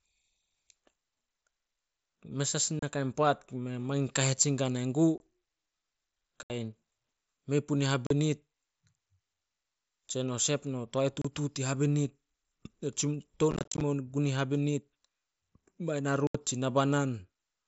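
Unconcealed Bluetooth headset packet loss cuts abrupt silent holes at 2.79, 5.18, 6.43, 8.07, 11.22 (after "no toae"), 13.5 to 13.8 (scattered crackle) and 16.27 s, each about 20 to 75 ms.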